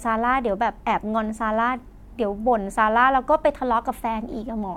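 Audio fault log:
No fault found in this speech clip.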